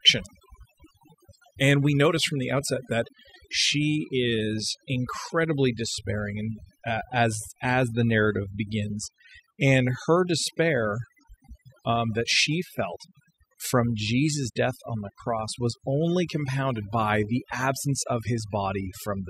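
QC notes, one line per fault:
Throughout: overdone noise removal. Noise reduction was pushed too hard on this speech, so individual frequency bands near the noise estimate are cut right down, taking quieter parts of the voice with them. The background drops and breaks up into twinkling specks.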